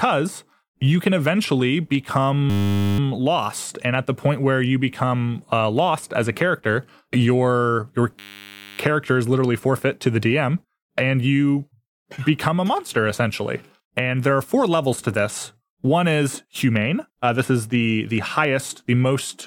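A steady 100 Hz buzz interrupts the speech from 2.50 to 2.99 s and again from 8.19 to 8.79 s. This is a system hang loop, with the hardware replaying the same 10 ms buffer while the system stalled.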